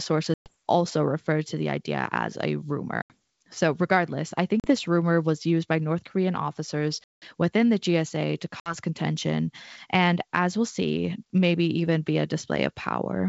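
Speech with packet loss on an ADPCM call: hard-edged silent holes at 0.34 s (120 ms lost), 3.02 s (80 ms), 4.60 s after "regardless I" (40 ms), 7.04 s before "within the" (180 ms) and 8.60 s before "contention and as we'll" (60 ms). Unlike a simple dropout, each gap leaves the G.722 decoder's predictor out of step, so the speech returns slightly distorted until it resettles.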